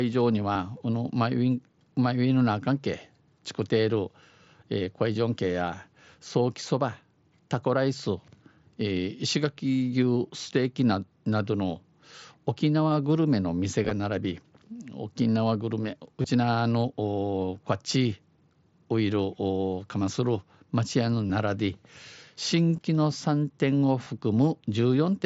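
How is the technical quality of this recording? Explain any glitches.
The recording has six brief glitches, all concealed Bluetooth headset packet loss. The wideband headset link carries sound up to 8 kHz with a light grain on louder moments.

The dropouts fall at 0.53–0.55, 13.84–13.91, 16.22–16.24, 21.28–21.30, 22.77 and 24.04–24.07 s. Packets between headset and phone went missing. The receiver filled each gap by repeating the best-matching stretch of recent waveform. The gaps are short, 15 to 45 ms. The one at 13.84 s is scattered over 75 ms. Each sounds like a held buzzy patch at full level with a slight warble as real audio returns.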